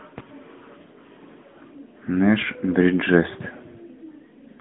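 From start to finish the speech carries the sound of the AMR narrowband mobile codec. The line is confined to roughly 150 Hz to 3.5 kHz, so the voice sounds thin and boxed-in, and the vocal-tract model rebuilding it at a modest bitrate, which fits a mode near 10 kbps, leaves a plainly audible buzzy, synthetic edge. On a spectrogram the energy stops at a hard ceiling near 3.5 kHz with nothing above, and the low bass is missing.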